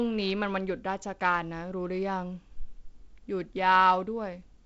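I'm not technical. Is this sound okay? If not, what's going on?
Yes, it's fine: this is speech carried over an ordinary wideband phone connection (G.722), which is why the sound tops out at about 7.7 kHz and has that slightly phone-like quality, and nothing in it has gone wrong.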